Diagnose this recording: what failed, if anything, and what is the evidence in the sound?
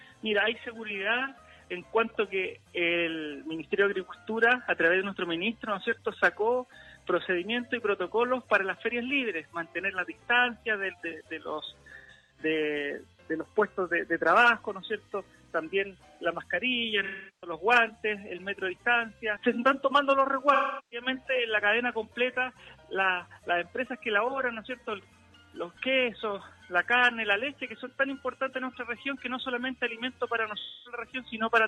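The codec stage failed with AAC frame loss with concealment. A brief smeared patch at 1.25 s lasts about 43 ms, which fits a single lost frame. Longer gaps sit at 12.0–12.4 s, 17.0–17.5 s, 20.5–21.1 s and 30.6–31.0 s. Each loses roughly 250 to 380 ms. The 12.0 s gap is broken up, with its longest run around 150 ms. The decoder rebuilt the holes from the last good spectrum, so those stretches turn noisy and phasey.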